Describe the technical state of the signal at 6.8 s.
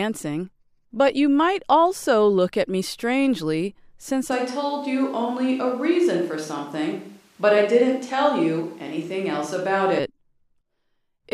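At 6.8 s the sound is roomy and hollow, with thin bass. This is a switch to a distant microphone, running from 4.32 s, just after "at me strangely since", to 9.99 s. The close microphone likely dropped out. Loudness holds steady, and room noise sits far below the speech.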